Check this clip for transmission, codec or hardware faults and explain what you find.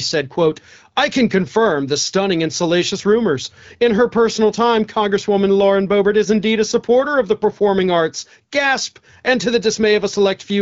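Nothing stood out on listening to this speech, which carries the clear, slightly band-limited character of wideband HD Voice coding.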